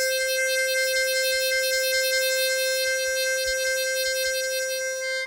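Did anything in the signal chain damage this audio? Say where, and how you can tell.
No, nothing in the chain seems to have harmed this music, and there's no point where a stage gives itself away.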